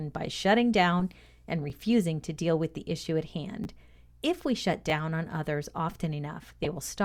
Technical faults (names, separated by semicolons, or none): corrupt frame decoded; repeated buffer